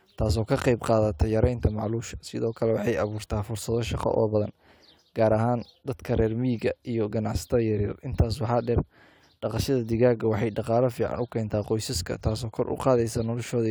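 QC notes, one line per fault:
No faults heard; nothing to log for this speech clip.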